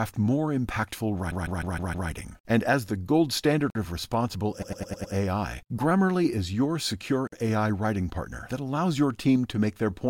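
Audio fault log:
1.29–2.08 s and 4.61–5.14 s, repeated frames: a run of compressed frames was written more than once, so the decoder replayed a 156.7 ms block and then a 104.5 ms block five extra times each. This produces a rapid stutter and adds about 0.78 s and 0.52 s.
3.70 s and 7.27 s, gap between chunks: the audio arrived in pieces, which fits 3-second chunks. That leaves a 50 ms hole of silence at each boundary, interrupting the sound without losing any of it.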